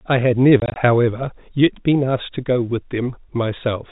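From 0.6 to 0.76 s, packet loss filled with silence chops the speech. About 80 ms vanishes across that 160 ms stretch, in gaps no longer than 20 ms, which fits lost 20 ms packets. Each hole has hard edges against the narrowband telephone sound.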